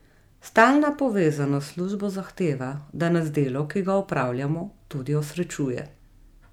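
A speech recording with nothing technically wrong to point to.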